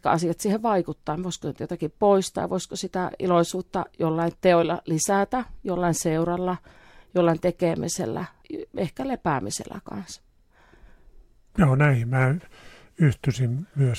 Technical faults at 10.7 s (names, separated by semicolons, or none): repeated frames